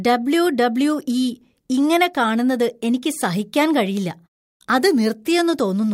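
No technical faults are audible anywhere in the speech.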